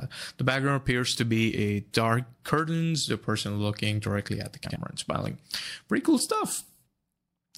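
At 4.65 s to 4.76 s, frames arrive out of order. Two neighbouring blocks of about 52 ms each, which fits two frames per block, were decoded swapped. The short stretch plays with its halves exchanged, giving a garbled flutter. No time is lost.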